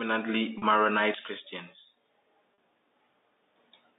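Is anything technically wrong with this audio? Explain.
Yes. There is packet loss with pitch repetition at 0.58 s and 2.54 s, each gap about 40 ms, which fits two lost packets. The receiver repeats the last pitch period to fill each gap, so the speech briefly holds with a slight buzz. The telephone band, limited to about 250 Hz to 3.7 kHz, comes from G.711 coding.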